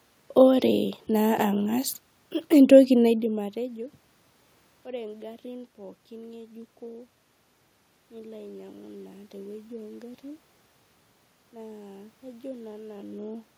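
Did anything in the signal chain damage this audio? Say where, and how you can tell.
No, nothing in the signal chain has damaged this audio. The room noise belongs to the recording itself, and the level shifts around 3 s and again near 13 s sound like the talker moving relative to the microphone rather than anything the equipment did.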